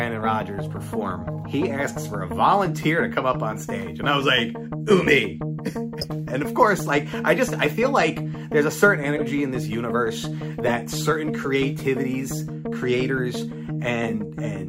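At 6.01–6.06, 9.16–9.22 and 10.66–10.71 s, a corrupt frame was decoded: damaged bits put energy at wrong frequencies, giving fairly loud, brief chirps, squeaks, blips or bursts of noise. Unlike a dropout or concealed loss, spurious sound is added rather than simply lost.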